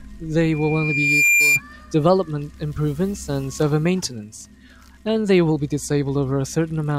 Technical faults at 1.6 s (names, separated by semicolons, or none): loudspeaker feedback squeal